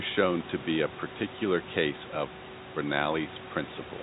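No faults are audible in the speech; the room noise sits about 16 dB below it, and nothing reaches above 4 kHz, which fits a narrowband G.711 A-law call path at 64 kbps with its ordinary coding noise.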